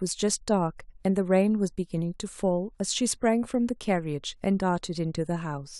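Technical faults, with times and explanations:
Nothing technical gets in the way here; the speech comes through without any audible glitches, dropouts or damage to trip over.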